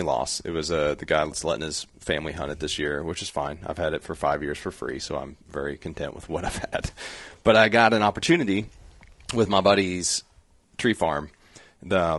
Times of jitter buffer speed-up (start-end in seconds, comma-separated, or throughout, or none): none